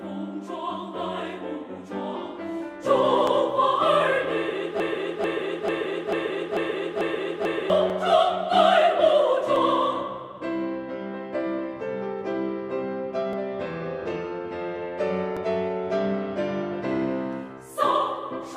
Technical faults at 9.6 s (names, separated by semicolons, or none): dropped samples